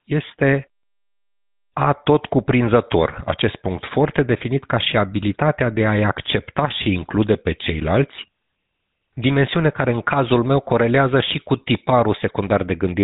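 From start to finish the speech carries the signature of the GSM full-rate codec. The vocal tract is modelled as a filter, and the excitation driving it is thinned to a regular pulse grid. That leaves a plainly audible buzzy, gravelly roughness on every voiced stretch, at a data rate that fits about 13 kbps. On a spectrogram the energy stops sharply near 3.8 kHz, with coarse, smeared harmonics beneath. The waveform looks grainy rather than smooth.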